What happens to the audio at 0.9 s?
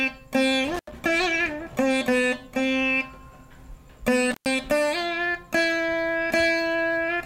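Intermittent contact runs 0.74–0.92 s: a loose connection opens for about 83 ms, cutting the sound to faint hiss, with crackle at the edges that a clean digital dropout lacks.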